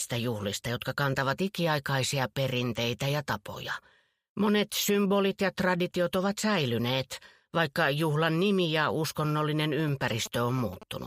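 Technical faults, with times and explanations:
9.80–10.83 s, GSM signalling bursts: a galloping dit-dit-dit cluster of short buzzes pulsing at 216.7 Hz, roughly 15 dB below the main sound. A nearby 2G phone transmitting signalling bursts is being picked up and rectified by the audio electronics, turning radio pulses into audible clicks.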